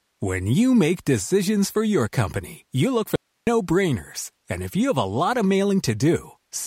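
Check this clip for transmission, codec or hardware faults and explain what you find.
One fault: an audio dropout to a faint residue, from 3.16 to 3.47 s, just after "company you look for". The signal feeding the path was likely lost for about 0.31 s while everything downstream stayed live, so the chain kept passing its own noise floor instead of silence. The speech cuts off abruptly, leaving only a thin hiss roughly 50 dB below the speech level, then snaps back in mid-flow rather than fading.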